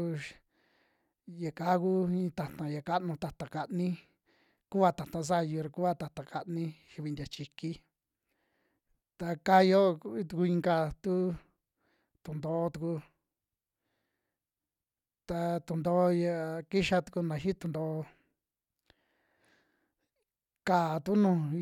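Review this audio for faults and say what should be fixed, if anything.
Dropped samples at 2.20 s and 3.66 s, the second just after "ta'ta ya kanu ta'ta": two sharp clicks, likely a handful of missing samples making the waveform jump abruptly. Prevent this by giving the capture path enough buffer headroom that no samples are skipped.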